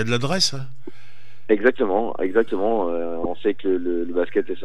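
Short bit of audio with one glitch: damaged data in a compressed stream around 3.23 to 3.26 s, a quick disruption where the decoder stumbles over corrupted frames and resyncs.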